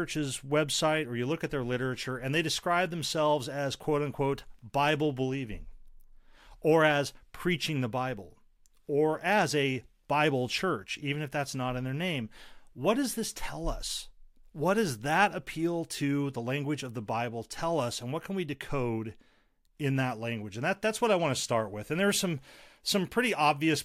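No audible technical faults turn up anywhere in this recording.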